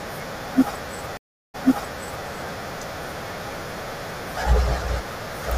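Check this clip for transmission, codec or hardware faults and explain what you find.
A stream reconnect occurs between 1.17 and 2.26 s. The connection dropped, leaving 0.37 s of silence, and a fresh decoder picked up mid-stream. The server resent buffered data, so speech resumes about 0.73 s earlier, audibly repeating what was just heard.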